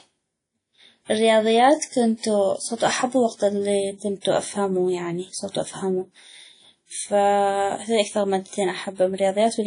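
WMA compression runs throughout the speech, plainly audible: a ringing, washy quality with hiss that swells and fades with the voice, and nothing above 10.1 kHz. This is likely a low-bitrate transform encode, around 32 kbps, whose long blocks smear quantisation noise.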